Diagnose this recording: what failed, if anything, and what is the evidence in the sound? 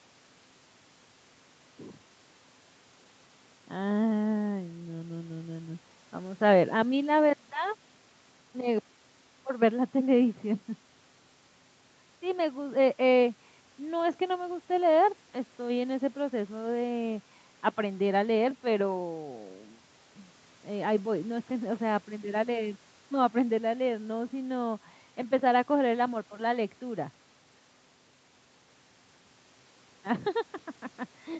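Nothing failed: the speech shows only the expected call microphone processing, with its trimmed lowest bass and nothing above 8 kHz, and no evidence of any fault in the sound.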